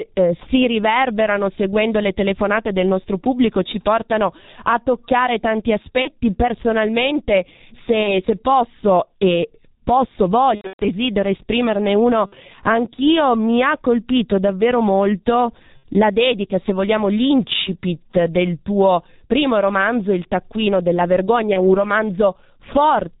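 G.723.1 codec damage runs through this whole speech recording: it sounds muffled and hoarse with smeared consonants, which fits heavy low-rate coding near 6.3 kbit/s with nothing passed above 4 kHz. VoIP packet loss concealed by the speech codec appears at 6.02–6.10, 8.03–8.23, 10.55–10.88, 12.26–12.36, 15.77–15.84 and 21.53–21.86 s. In each, the decoder stretches its last pitch and filter into a fading buzz or coloured noise, and the sound stays weak for a moment afterwards. The longest, at 10.55 s, suggests scattered losses totalling about 210 ms.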